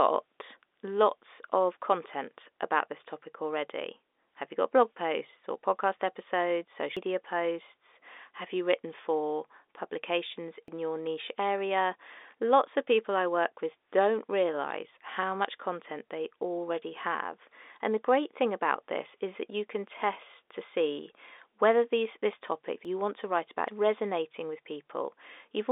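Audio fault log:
6.97 s, 10.68 s, 22.85 s, 23.68 s, dropped buffer (overrun): the speech jumps ahead with no gap, losing about a third of a second after "posts or podcast episodes" and about a tenth elsewhere, as between "you written for publications" and "your niche area". The likely cause is late reads letting hardware overwrite the buffer.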